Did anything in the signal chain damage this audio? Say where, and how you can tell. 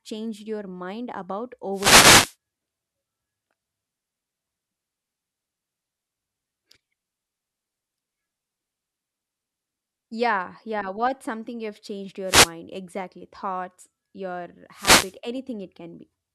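Yes. The analogue radio link before the converter caused wireless microphone noise hits at 1.72–2.36 s after "changed your mind about", 12.25–12.53 s after "something you've changed", and 14.72–15.17 s. Each is a swish of static: reflections cancel the FM carrier and receiver noise rises.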